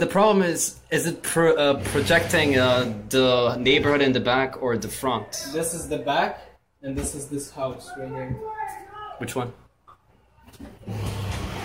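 Nothing here calls for comment, as the audio runs along without a single dropout, glitch or other technical problem anywhere in it.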